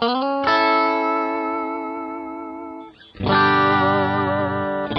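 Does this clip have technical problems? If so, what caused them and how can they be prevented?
Yes: at 2.42 s the adaptive stream drops to a lower bitrate and stays there to the end, with no gap. The treble vanishes above about 9.7 kHz and artefacts thicken, which fits a slowed connection pushing AAC from 96 to 32 kbit/s. Bigger buffers or a bitrate floor would prevent it.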